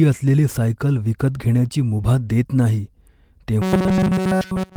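From 3.62 s to the end, the speech collapses into robotic sound from repeated short buffers: a rigid metallic buzz fixed near 188 Hz, with essentially every stretch repeated. The likely cause is audio arriving too seldom, so a chunk of about 5.3 ms is looped while real audio is skipped. The constant pitch sets it apart from ordinary choppy dropouts.

Inside that stretch, from 3.83 s to 3.97 s, comes a lost packet rebuilt from error correction: about 80 ms reconstructed from low-bitrate copies, which points to four lost packets. There is no silent gap, only rougher, noisier frames, which distinguishes it from concealment that fades or mutes.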